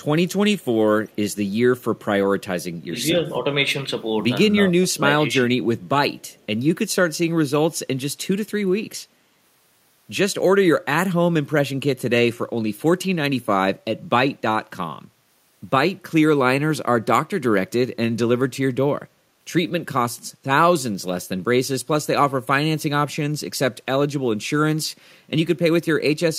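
Faint echo leaks appear at 0.6 to 0.65 s and 1.09 to 1.16 s. A copy of the speech returns 232 ms late, roughly 35 to 40 dB down. A far-end echo canceller likely left residue. At 2.86 to 2.96 s the speech dips slightly, about 5 dB. At 4.7 to 5.04 s it drops about 20 dB. This is speech suppressed in double talk, likely from the canceller turning down its own talker along with the loudspeaker echo. Echo leaks recur at 5.82 to 5.89 s and 6.21 to 6.46 s, again 232 ms behind.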